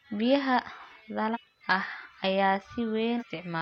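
A speech recording with two brief bursts of damaged data in a compressed stream, from 1.30 to 1.37 s and from 3.16 to 3.23 s. Each lasts about 70 ms where corrupted bytes made the decoder misread frames and lose sync until it found the next valid header. A dropout would leave silence, and a single click would be far shorter.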